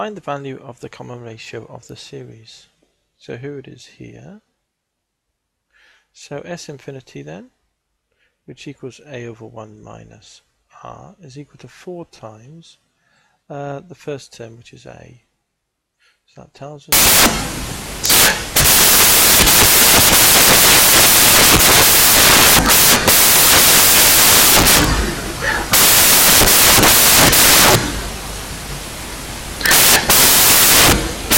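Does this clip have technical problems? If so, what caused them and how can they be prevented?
Yes. From 16.92 s to the end at 31.38 s, samples built from the wrong bytes: misaligned or swapped byte order turns low bits into loud, harsh broadband noise. Prevent it by checking the declared sample format, endianness and frame alignment against the actual data before decoding.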